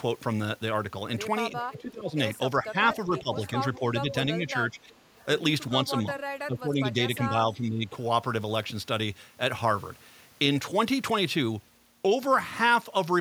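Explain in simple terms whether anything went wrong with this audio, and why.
Echo leak at 1.7 to 1.81 s, 3.34 to 3.78 s, 4.9 to 5.25 s and 6.17 to 6.22 s: a faint copy of the speech returns about 0.39 seconds late, quietest at 4.9 s. The likely cause is a loudspeaker on the far end whose echo canceller let some sound back into its microphone.

Speech suppressed in double talk at 1.77 to 2.17 s, 2.57 to 3.32 s, 3.75 to 4.93 s and 6.47 to 7.95 s: the talker's speech dips in level. The drop is deepest near 1.8 s and 6.5 s, and only slight near 3.75 s. This likely happened because both sides spoke at once and the echo canceller turned down real speech along with the echo.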